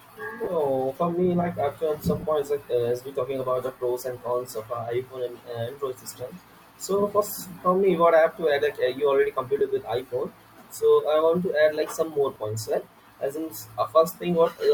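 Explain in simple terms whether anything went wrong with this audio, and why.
Four short dropouts come from lost LE Audio frames, at 0.44, 2.20, 9.59 and 12.34 seconds, each lasting 20 to 30 ms. The wireless link missed a few packets, and the decoder filled each gap by repeating the last sound with scrambled detail, leaving a brief noisy smear in the speech. The light lossy compression is not a fault.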